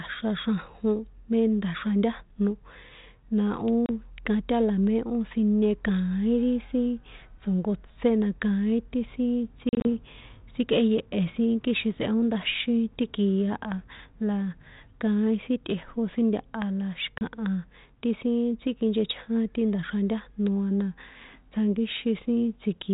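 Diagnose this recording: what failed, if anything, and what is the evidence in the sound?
The network stage is where this goes wrong: packet loss on an ADPCM call. There are hard-edged silent holes at 3.86 to 3.91 s and 17.18 to 17.22 s, each about 30 ms, or a few packets' worth. At 9.69 to 9.92 s, about 100 ms drops out in patches across 160 ms, with the longest gap 40 ms. After each hole the speech comes back slightly distorted, then settles within tens of milliseconds. The decoder's adaptive predictor and step size lose track of the sender's during the gaps and take a moment to catch up. The light ADPCM grain sounds like 32 kbit/s G.726.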